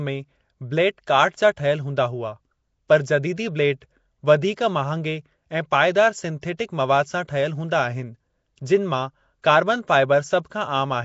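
A speech recording, rough and hissy throughout with a smeared, underwater quality and nothing above 7.7 kHz, which points to likely Nellymoser compression at a low bitrate around 32 kbps. At 6.41 s, just before "मवाद सां", a brief 16 ms hiss precedes the attack and softens it: pre-echo, where quantisation noise fills the quiet moment before the onset.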